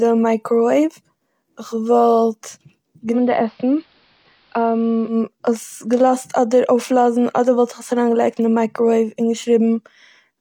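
Speech, with digital radio blending to analogue from 3.10 to 5.17 s. Brief 106 ms cross-fades into AM drop the level about 2 dB and raise faint hiss, unlike a plain filter change.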